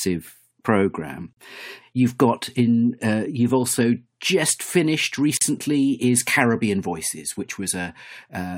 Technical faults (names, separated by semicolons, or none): gap at a join of encoded pieces